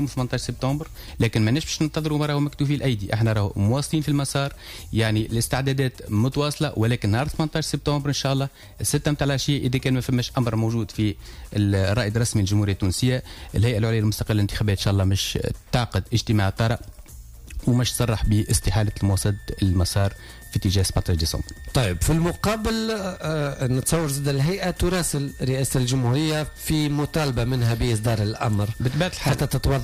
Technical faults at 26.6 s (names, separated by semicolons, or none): switching supply whistle